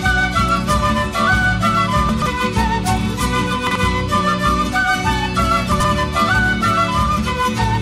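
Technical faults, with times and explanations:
2.09–2.26 s, 3.67–3.76 s and 5.72–5.85 s, chunks out of order: a block of about 43 ms plays three, one and two blocks late respectively. Each event briefly jumbles the sound.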